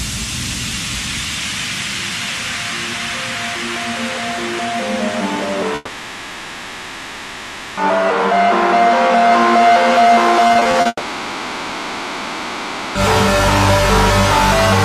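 From 5.75 to 7.79 s the sound dissolves into a buzzy continuation of itself that fades to a low, steady noise, then resumes with the intervening two seconds gone. This is a long network dropout, likely a stall in arriving audio that the receiver papered over.

At 10.47 to 10.87 s the sound turns choppy. Six short holes, the longest 40 ms, are each patched by stretching the previous sound, covering about 35% of that span. This is repeated packet loss, producing choppy sound with pieces missing.

It runs straight into a second long network dropout from 10.87 to 12.97 s. The sound again smears into a fading hum with only a brief moment of true silence, and about 2.1 s is missing. A sustained interruption in delivery is the likely cause.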